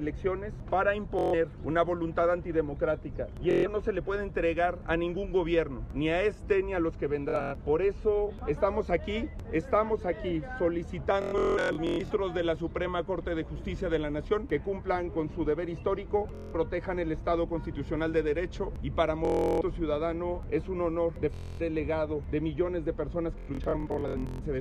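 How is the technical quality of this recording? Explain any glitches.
The recording is hit by repeated Bluetooth stutter, eight bursts in all: 1.19 to 1.34 s, 3.51 to 3.67 s, 7.29 to 7.54 s, 11.22 to 12.12 s, 16.35 to 16.55 s, 19.25 to 19.61 s, 21.34 to 21.61 s and 23.38 to 24.43 s. The wireless link dropped or delayed packets, so the receiver kept replaying its last slice of about 23 ms. That gives a buzzy, machine-gun rattle. The worst ones, at 11.2 s and 23.4 s, come in scattered clumps lasting about a second, and each time the sound picks up further along, as if it had kept going underneath.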